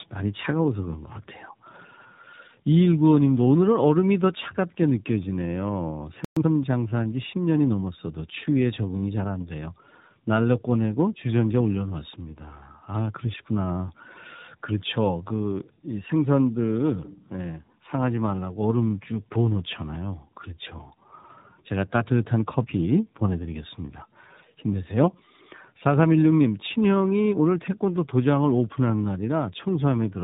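Throughout, the speech shows tandem speech coding: it passed through iLBC, G.711 and AMR-NB, so two low-rate speech coders compounded their damage, leaving it rougher and more warbly than one coder would.

From 6.25 to 6.37 s a playback stall silences the sound for 120 ms, likely because the player ran short of data. Unlike a dropout, nothing is lost; the speech resumes where it stopped.

From 6.37 to 6.49 s, time-compressed catch-up plays the backlog at twice normal speed. The pitch stays unchanged, unlike a plain speed-up.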